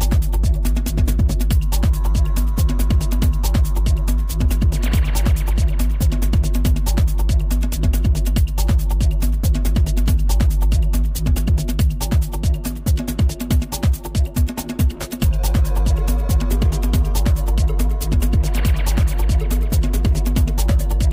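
Nothing in the audio stood out as a technical problem on listening.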